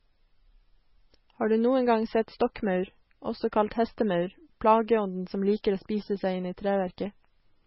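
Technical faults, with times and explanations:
Throughout, MP3 compression: likely a bit-starved MP3 encoder, fitting about 17 kbps, cuts everything above 5.6 kHz and drops weak detail, so the speech sounds dull, watery and swirling.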